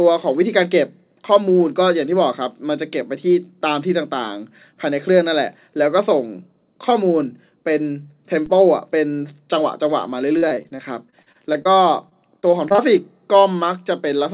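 At 8.46 s a single low thump cuts across the speech: a DC step, where the waveform's zero line suddenly shifts and then drains away through a 20 Hz high-pass. From 10.38 to 11.67 s and again from 12.09 to 12.80 s the speech turns choppy and robotic, with repeated short dropouts of up to about 41 ms and 20 ms. This is repeated packet loss, where each missing stretch is patched by extending the previous sound, and the band-limited, narrowband character, with nothing above 4 kHz, points to a G.711-style call codec.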